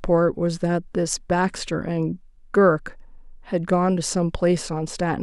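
No technical faults are audible anywhere in the speech recording.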